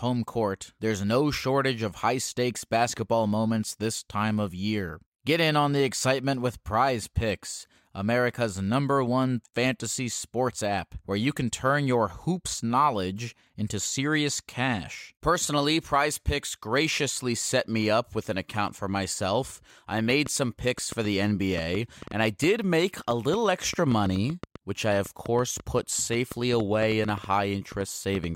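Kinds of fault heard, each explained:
Train of clicks: Right after "account for myself I", at about 20.1 s, a run of near-identical clicks starts ticking over the speech and keeps going to about 28.25 s, roughly forty of them at around 4.7 a second but unevenly spaced. They poke through at about 5 dB above the speech and are heard in the pauses too, so it's likely outside interference or a faulty connection or power supply injecting pulses rather than anything in the recording itself.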